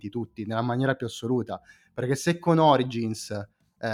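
No technical faults can be heard anywhere in this speech recording. There are no dropouts, glitches or other disturbances at any point.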